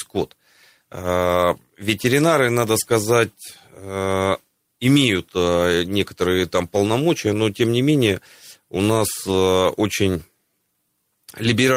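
Speech, with lost packet rebuilt from error correction, three packets, between 9.23 and 9.33 s. The sound never drops out. For about a tenth of a second it turns rougher and grainier, because the decoder is playing low-bitrate backup copies carried in the following packets. The 60 ms of rebuilt audio fits roughly three lost 20 ms packets. The waveform stays continuous with no gap. On a spectrogram, the stretch shows as a short patch of smeared, noisier texture with blurred harmonics.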